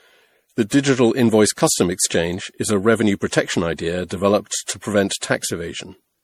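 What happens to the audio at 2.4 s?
At 2.4 s the speech carries generation loss, present across the whole clip. It sounds swirly, smeared and hollow, with blurred attacks. Nothing sounds above 19.5 kHz. The likely cause is repeated lossy re-encoding, around five passes, fitting MP3 at 64 kbit/s.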